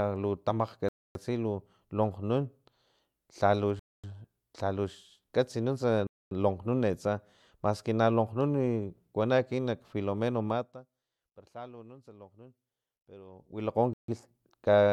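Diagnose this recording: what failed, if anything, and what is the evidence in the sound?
The speech cuts abruptly to silence four times: 0.89 to 1.15 s (about 0.27 s), 3.79 to 4.04 s, 6.07 to 6.31 s (each about 0.24 s), and 13.93 to 14.08 s (about 0.15 s). These dropouts are likely a Bluetooth stall on the wireless link. Radio interference delayed packets, the headphone buffer emptied, and playback paused until the retransmissions arrived. On a waveform each gap is a flat line with hard edges. On a spectrogram it is a clean vertical band of silence across all frequencies, unlike the gradual fader moves elsewhere.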